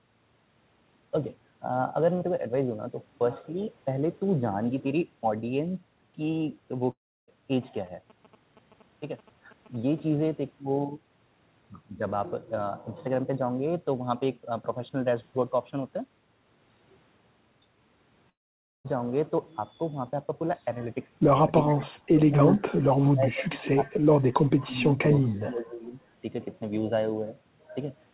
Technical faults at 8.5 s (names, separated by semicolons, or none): GSM signalling bursts